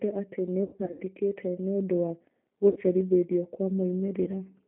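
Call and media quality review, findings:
G.729 codec, whole clip: speech band-limited to roughly 150 Hz–3.4 kHz, rough, slightly synthetic timbre at 8 kbit/s, plainly audible. Component: G.729A encoder/decoder. Filter-plus-pulse rebuild, not plain lowpass or MP3-style swirl.

VoIP packet loss concealed by the speech codec, 0.64–1.02 s: about 240 ms lost, scattered over 360 ms, longest gap 90 ms, fits eight 30 ms packets. Decoder extrapolates the last pitch and filter into a fading buzz or coloured noise, then stays weak after recovery, unlike hard dropouts.

Same fault, 2.70–2.79 s: 60 ms lost, fits two packets. Brief buzzy or noisy stretch with a soft tail rather than a silent gap or click; network path.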